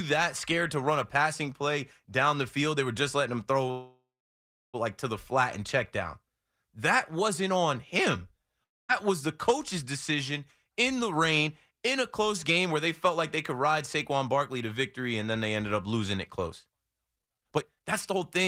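Speech clip with three kinds of transport fault. A call audio freeze runs from 3.71 to 4.76 s, between "were just letting him" and "like to the flat". The last sound carries on as a decaying buzz, then about 0.7 s of near-silence, before the speech resumes exactly where it stopped. The likely cause is delayed packets draining the jitter buffer. Nothing is lost, but about 1.02 s of extra latency is inserted. A long network dropout follows at 8.64 to 8.91 s, after "wasn't on him" and before "was the coach's decision". The receiver fills about 0.25 s, almost all of it silent, and when audio returns roughly 0.26 s of speech is gone for good, most likely because a run of packets never arrived. Jitter buffer speed-up then appears twice. From 10.64 to 13.64 s, just after "was the coach's decision", playback runs at 104 % with pitch unchanged, trimming roughly 0.15 s by cutting out short pitch-period segments. 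That is mild, just under the speed at which speech starts to sound hurried. From 17.16 to 18.21 s the same process runs at 167 %, removing roughly 0.7 s, so the speech sounds clearly rushed and compressed while keeping its pitch. Both passages reflect the receiver shedding built-up buffer delay.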